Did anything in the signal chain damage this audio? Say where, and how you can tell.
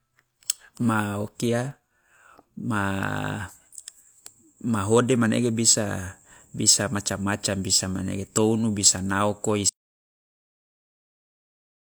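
Yes. At 9.69 s the speech breaks off and the clip holds an audio dropout to silence through to the end. The stage is most likely the input side, a device or link that stopped delivering samples, or a mute, while the recorder kept writing silence. You can tell because the cut is abrupt, and the remaining stretch is silence with no room tone or noise floor underneath, so whatever followed is lost.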